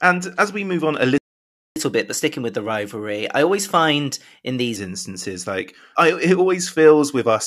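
A speech recording in which the audio cuts to dead silence right after "we move on a", from 1.18 to 1.76 s, a gap of about 0.58 s before the sound resumes. This is a playback stall, most likely the player running out of buffered data or having its output thread blocked. From 1.76 to 4.76 s the speech runs quick and slightly high, at 1.1 times normal speed and about a semitone and a half sharp, settling back before "instances like". That is catch-up at higher speed: the player resamples its backlog to recover the lost time, raising speed and pitch together.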